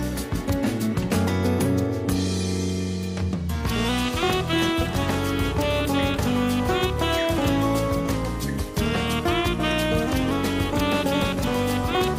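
The audio slows and drops in pitch twice, from 3.36 to 3.89 s and from 8.14 to 10.31 s. Each time, speed falls by about 6% and pitch by 109 cents, roughly a semitone, then returns. This is likely a gross drift correction step.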